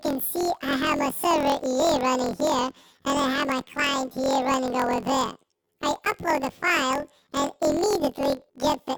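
From the first moment to the end, the sound plays an octave high with a steady flutter at about 43 Hz. That's planar audio read as interleaved. Each block stores all its left samples and then all its right ones, but the player treats them as alternating pairs. So every 23.22 ms block plays twice at double speed, left then right. The overall pace holds, but the pitch jumps 12 semitones, which fits a 1024-sample block.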